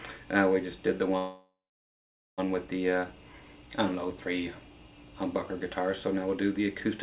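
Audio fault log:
1.18–2.40 s, call audio freeze: the last sound is stretched into a fading buzz or hiss, then about 0.83 s of silence. The audio resumes where it stopped with nothing lost but now runs 1.2 s late, likely because delayed packets emptied the jitter buffer.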